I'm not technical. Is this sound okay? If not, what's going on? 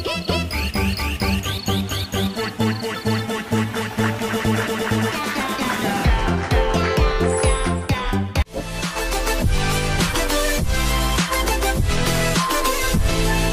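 Yes, nothing here sounds wrong; it's fine as is.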